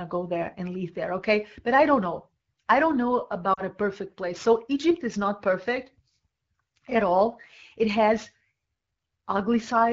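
At 3.53 s the speech catches and smears until 3.62 s, about 40 ms in all. These are lost AMR speech frames. Radio errors corrupted the data, so the decoder had no valid frames to play. It repeated the last good pitch and vocal tract settings at falling gain. The gap points to two consecutive 20 ms frames. The sound drags briefly and dips in level. The speech then returns weak for a moment, within the light coding of AMR-WB at 12.65 kbit/s.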